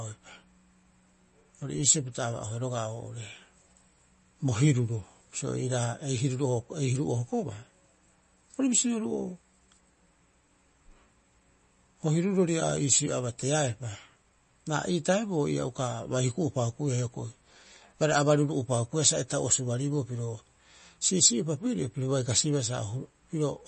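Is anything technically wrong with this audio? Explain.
Yes. Throughout the speech there is plainly audible MP3 compression damage. The audio sounds watery, with chirpy s sounds and nothing above 8.3 kHz. The likely cause is a bit-starved encoder, at a rate that fits 32 kbps, cutting the treble and dropping weak frequency lines frame by frame. A spectrogram would show a hard ceiling at 8.3 kHz with flickering, patchy detail below it.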